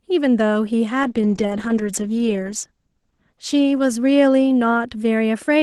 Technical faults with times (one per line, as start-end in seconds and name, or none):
1.05-5.62 call bitrate drop